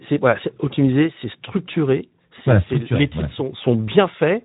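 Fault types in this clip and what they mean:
Speex codec: A CELP speech coder from older VoIP and game chat is coding this speech, and the sound fits a bitrate around 11 kbps. With so few bits for the excitation, its damage is plainly audible as a noisy, hoarse texture laid over the speech. On a spectrogram, energy stops flat at about 3.8 kHz with nothing above it, and the harmonic striations below look grainy and smeared rather than clean.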